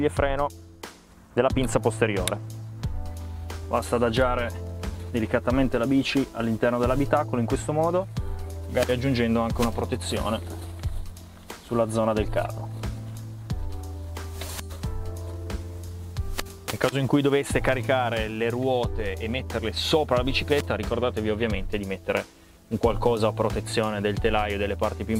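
Dropped samples at 16.52 s: a single sharp click, showing on a spectrogram as a thin vertical line running through the whole frequency range. The likely cause is a tiny gap in the stream, roughly a tenth of a millisecond of samples missing, so the waveform leaps straight from one value to a later one. That instant step carries broadband energy, which is why it clicks, yet the loss is far too brief to remove any audible sound.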